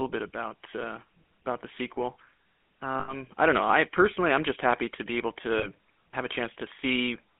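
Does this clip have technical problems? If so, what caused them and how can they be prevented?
Yes. The GSM full-rate codec makes the whole clip buzzy and gravelly, consistent with a 13 kbps stream. On a spectrogram, energy is confined to roughly 200 Hz to 3.4 kHz, and the harmonics look smeared. Using a wideband codec on the call path would prevent this.

Lost GSM frames at 3.00 to 3.14 s (80 ms) and 5.58 to 5.68 s (40 ms) hold the last sound as a metallic ring. On the waveform this shows as a repeating, decaying cycle, and on the spectrogram as a frozen, smeared band. A more reliable radio link or stronger error protection would prevent these losses.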